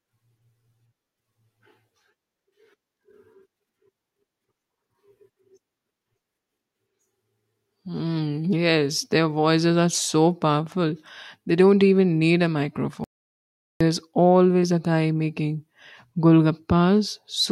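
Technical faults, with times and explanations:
13.04–13.81 s, audio dropout to silence: after "don't even need a" the sound drops to silence for 0.76 s, no room tone, until "always a guy making", likely a briefly lost input.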